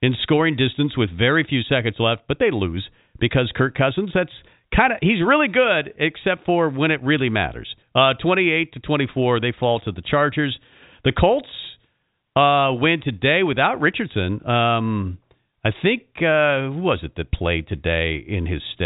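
There are no technical faults to describe: the speech comes through G.711 telephone coding, with nothing heard above about 3.8 kHz, and no event stands out at any point in time.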